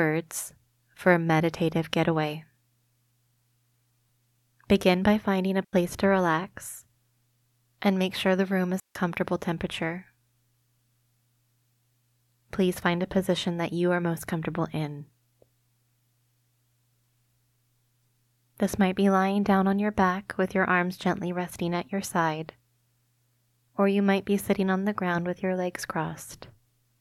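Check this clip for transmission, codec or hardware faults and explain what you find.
Two digital wireless dropouts occur in the speech. The first runs from 5.64 to 5.73 s, about 88 ms, between "by finding a" and "to relax". The second runs from 8.80 to 8.95 s, about 154 ms, just after "make sure the room". In each case the radio link lost too much data for the receiver to conceal, so it muted with a very quick fade. Each dropout is a clean gap of near silence with no noise burst on either side.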